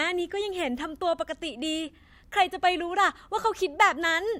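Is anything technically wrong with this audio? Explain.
Yes. Block size mismatch (truncated), 2.35 to 3.39 s: each written block, consistent with 1024 samples, loses its tail downstream, causing a 43.1 Hz buzz over the speech.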